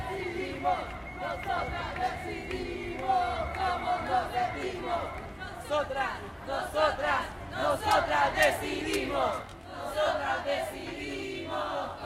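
A recording of everyday sound. From 9.42 s to the end at 12.06 s it turns rough and slightly doubled. This is channel delay, heard as comb filtering. One channel arrives late, by around 20 ms, and the two are mixed to mono. Whatever both channels share cancels at evenly spaced frequencies. The first notch sits near 20 Hz, with more repeating at regular intervals above it.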